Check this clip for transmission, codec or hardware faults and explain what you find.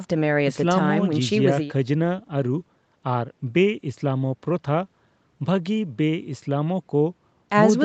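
Nothing here points to a transmission, codec or hardware fault; the speech simply carries the usual marks of a call's microphone processing, with the lowest bass trimmed away and nothing above 8 kHz, which is just how that path sounds.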